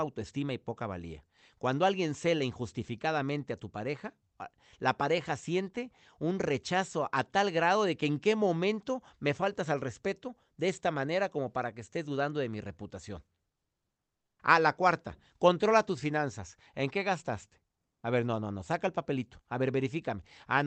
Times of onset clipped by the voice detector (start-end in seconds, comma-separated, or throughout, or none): 14.27-14.39